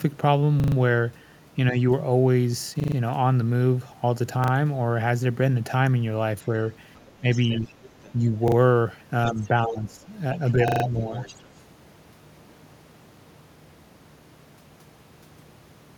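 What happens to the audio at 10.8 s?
At 10.8 s, two faults overlap. The first is a repeated buffer from 10.68 to 10.84 s. New audio did not arrive in time, so the same short slice played again, four more times in a row. Each repeat meets the next at a hard join. That gives a quick, rattling stutter. The repeat spacing fits a 40 ms buffer. Almost nothing seems lost afterwards, so the sound just resumes late.

Around the stutter, from 10.35 to 11.44 s, a second, fainter voice can be heard under the main speech. It sits roughly 15 dB below it. This is the other side's voice leaking through. The likely cause is that the talker's device played the far end through a loudspeaker and the echo canceller did not fully remove it from the microphone signal. The leaked voice is faint and separate from the main talker.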